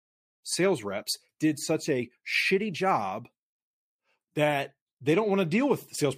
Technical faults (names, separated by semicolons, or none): none